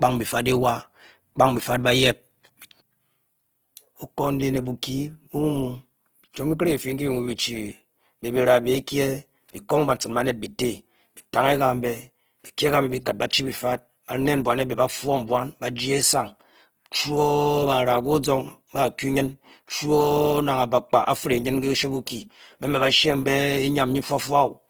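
Throughout the speech, a grainy, rough texture points to Opus compression. The likely cause is music-mode coding near 16 kbps, which fills starved bands with noise.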